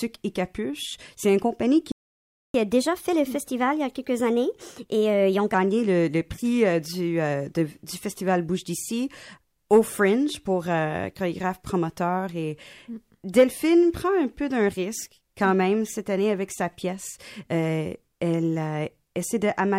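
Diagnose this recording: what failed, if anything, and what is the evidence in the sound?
At the playback stage, a playback stall cuts the speech from 1.92 s to 2.54 s, about 0.63 s of silence, and it then resumes where it left off. That most likely comes from a starved buffer or blocked player thread. Unlike a network dropout, nothing is lost.

Catch-up at higher speed follows from 2.54 s to 5.54 s. The player resamples its backlog at 1.15 times speed, so pitch rises about two semitones along with tempo, then settles. A time-stretch would keep pitch steady; here both shift together.

Pre-echo at 9.70 s points to the codec. About 11 ms before a sharp onset, a hiss roughly 12 dB up smears the attack. That fits a transform block near 26 ms with no switch to short blocks. It differs from a true echo because it comes before the attack.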